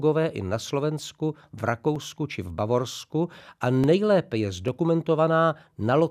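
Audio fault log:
0.69 s, 1.96 s, 3.84 s and 4.68 s: four dropped samples, each a single sharp click in the speech. Under a millisecond of the stream is likely missing, so the waveform jumps abruptly to a later value. That step is far too brief to remove any sound and is heard only as the click.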